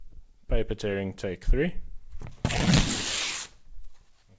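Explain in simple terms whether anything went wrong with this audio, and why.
Nothing went wrong here.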